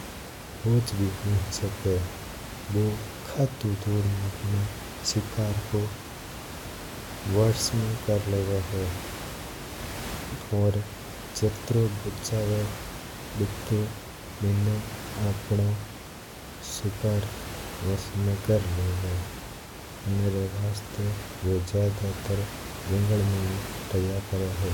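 Nothing goes wrong on the technical side here; the only extra sound is some room noise sitting about 11 dB below the speech, which belongs to the space the microphone was in rather than to anything in the system.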